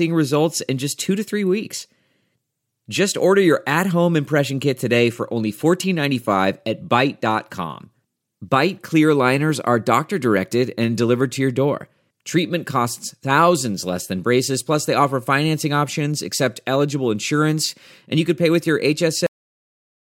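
A speech recording with a cut-off end: at 19.27 s, right after "could pay with your", the audio stops mid-sound and falls straight to digital silence for the remaining 0.85 s or so. The final buffers were never written or played back. A natural ending or a fade-out would let the sound decay or the level taper gradually, but here there is no release or room tail. The signal simply vanishes partway through the phrase.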